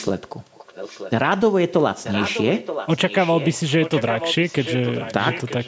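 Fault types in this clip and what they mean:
Echo leak: A quieter, delayed copy of the speech trails the original by about 0.93 s. It is heard from 0.51 to 1.11 s, from 2.03 to 3.59 s and from 3.81 to 5.67 s. It sits roughly 15 dB below the speech in the first stretch and about 10 dB below in the later two. The likely cause is a far end playing the call over a loudspeaker, with its echo canceller failing to remove the pickup before sending it back.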